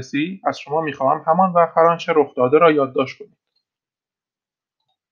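Listening to the speech recording, nothing technical stood out as wrong.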